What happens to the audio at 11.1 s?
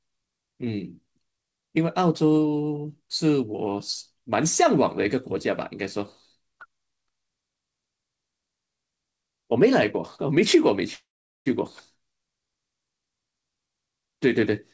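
From 10.94 to 11.48 s the sound stalls: a brief fading buzz, then about 0.4 s of silence, before it resumes exactly where it stopped with nothing lost. This is a call audio freeze, likely from delayed packets draining the jitter buffer, adding roughly half a second of delay.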